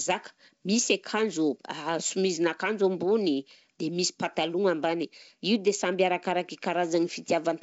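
No faults can be heard.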